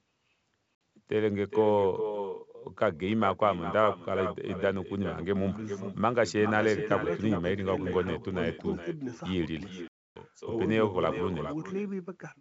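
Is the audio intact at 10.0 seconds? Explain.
No. From 9.88 to 10.25 s there is packet loss on an ADPCM call. About 280 ms of audio drops to hard-edged silence, and the decoder's predictor and step size lose track of the sender's. The speech comes back slightly distorted and settles within tens of milliseconds. A plain dropout would resume cleanly.

Echo with no canceller is also present at this moment, as it is throughout. The far end's loudspeaker feeds its microphone, so the speech returns about 9 dB quieter and thinner, trailing by around 0.4 s. That network round-trip delay sets it apart from short room reverberation.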